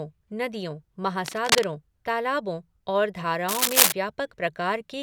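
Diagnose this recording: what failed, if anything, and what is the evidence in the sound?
A worn cable or connector in the analogue wiring likely shifted, its contact resistance fluctuating rapidly. The result is cable scratch noise: ragged rustling bursts from 1.25 to 1.64 s, before "तालाबों और", at about speech level, and from 3.48 to 3.92 s, after "तालाबों और", somewhat louder.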